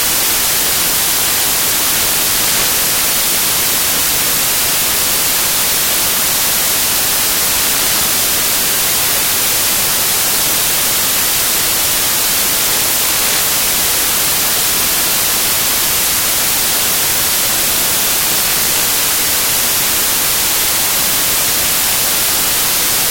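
The reader assembled each sample from the wrong bytes throughout, so fast-changing low bits became the dominant value, turning the audio into loud, harsh broadband noise.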